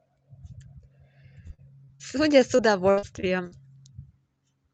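Repeated packet loss (robotic sound) at 1.47–2.01 s and 2.57–3.53 s: gaps up to 61 ms are patched by stretching earlier sound, leaving choppy speech with pieces missing.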